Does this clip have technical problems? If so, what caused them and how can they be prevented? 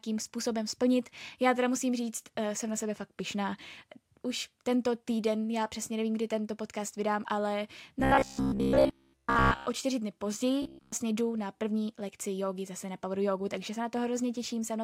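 Yes. From 8.00 to 9.66 s, right after "tento podcast vydám ale", the speech turns into robotic sound from repeated short buffers. It's a rigid, metallic buzz at 66.7 Hz, which fits a 15 ms chunk being looped, and most of that stretch is repeats. A shorter burst from 10.62 to 10.92 s, after "o čtyři dny", is pure buzz. The likely cause is audio arriving too late, so the player kept replaying its last buffer instead. A bigger jitter buffer or steadier network and CPU scheduling would prevent it.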